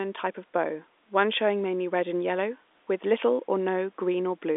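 No technical faults can be heard anywhere in the speech. It comes through a working G.711 telephone path, so the sound sits in a narrow line band of roughly 250 Hz to 3.6 kHz with nothing above 3.8 kHz.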